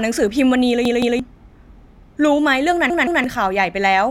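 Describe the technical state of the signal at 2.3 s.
At 2.3 s the speech signal is intact, with no dropout, distortion, glitch or other fault audible there.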